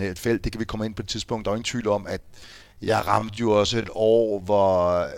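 At 2.18 s, right after "jo ingen tvivl om", the speech abruptly slows to about 0.59 times its pace through to the end while pitch holds steady. This is a time-stretched section, likely from software repeating short pieces to lengthen the audio, leaving it dragging.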